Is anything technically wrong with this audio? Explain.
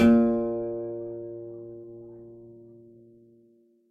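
Yes. Short concealed packet loss occurs between 1.81 and 1.86 s: about 20 ms of the music arrived too late to decode, and the receiver filled 17 ms by extending the preceding sound before blending back, adding about 10 ms. It comes across as a brief smear or wobble.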